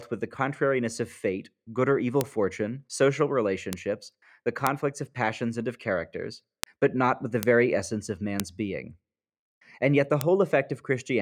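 Speech clip with seven bit error spikes, single sharp broadband ticks at 2.21 s (after "fate good or evil"), 3.73 s, 4.67 s, 6.64 s, 7.43 s, 8.40 s and 10.21 s (after "yet the"). Each is a flipped bit in one to three samples, peaking near about −2 dBFS, or about −8 dBFS at 3.73 s.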